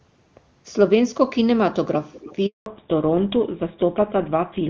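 Echo leak, 2.12 to 2.36 s: a faint, delayed copy of the speech appears about 0.3 s behind the original, roughly 20 dB quieter, as a brief ghost trailing the talker. The likely cause is a far end playing the call over a loudspeaker, where the echo canceller failed to fully subtract what its microphone picked up, so a scrap of the returning signal slipped through and was sent back down the line.

Handover gap, 2.46 to 2.66 s: the speech fades within a few tens of milliseconds and drops to silence for 200 ms before resuming. This is the call being passed from one network to another. During the switch no speech frames reached the receiver, so there was nothing to decode, and whatever was said in that fifth of a second is simply missing rather than masked or smeared.

Fallback to narrowband, from 2.66 s to the end: right after the gap the bandwidth collapses, with nothing above 4 kHz. The call left HD Voice, whose wideband coding had kept speech crisp well above that, and came back on an older narrowband codec, which fits GSM full rate. 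Sibilants and consonant edges lose their brightness, and the speech sounds duller, boxier and rougher for the remainder of the clip.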